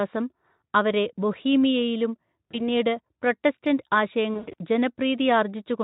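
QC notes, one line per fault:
2.52–2.68 s, just after "അവരെ ബൊഹീമിയയിലും", VoIP packet loss concealed by the speech codec: a brief smear, consistent with one lost 20 ms frame. The decoder extrapolates, then needs time to recover.
4.33–4.54 s, VoIP packet loss concealed by the speech codec: about 140 ms lost across 200 ms, longest gap 100 ms. The Speex decoder stretches the last pitch and filter into a fading buzzy tone or coloured noise, and the sound stays weak or distorted afterwards.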